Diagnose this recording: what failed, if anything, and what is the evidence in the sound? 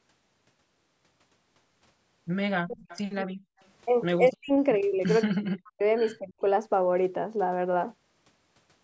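The speech ducks hard in five places: 2.63 to 2.86 s, 3.23 to 3.35 s, 4.3 to 4.51 s, 5.31 to 5.82 s and 6.19 to 6.42 s. Most dips bottom out about 40 dB down, and the second only about 30 dB. Each lasts a fifth of a second or so, except the second at about a tenth of a second and the 5.31 s one at roughly half a second. The stage is call processing, and the likely cause is speech suppressed in double talk. The echo canceller, unable to separate the near talker from the far side speaking at the same moment, turned everything down.

From 2.86 to 3.02 s, right after the first dip, a faint second copy of the speech trails the original by 219 ms, sitting about 20 dB below it. This is an echo leak, likely from a loudspeaker endpoint whose canceller let some of its microphone pickup slip back into the call. A single discrete repeat at a fixed delay rules out room reverberation, which would smear continuously rather than repeat once. 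It lies inside the same 8 kHz-limited call band as the rest of the audio.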